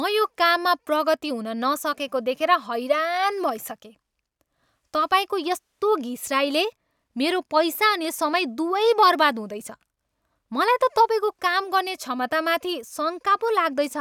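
No dropouts, clicks, distortion or level jumps turn up anywhere in the recording.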